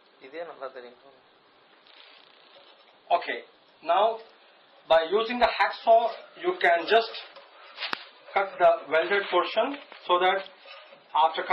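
No technical fault can be heard anywhere in the clip. Nothing in the audio points to a problem in the chain that recorded or carried it.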